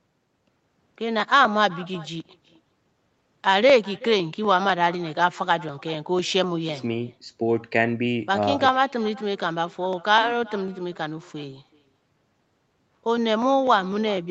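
From the very start, every phrase of the speech is followed by a faint, thin copy of itself, arriving roughly 0.4 s later and sitting about 22 dB below the direct voice. This is echo with no canceller: the far end played the call through a loudspeaker, its microphone picked it up again, and nothing subtracted it before it came back. Room reverberation would smear into the tail of each syllable. This echo instead arrives as a distinct, delayed repeat after a clear gap.

From 0.20 s to the end, a tick or small pop recurs every 0.25 s, heard only while sound is present. These are periodic USB or driver dropouts. At each tick, a short stretch of samples is skipped outright rather than filled with silence, so the waveform jumps and clicks. Network packet loss scatters its gaps unevenly. These land on a steady grid, which points to something on the machine stalling the audio device at a fixed interval. 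The call's band limit at 8 kHz is normal.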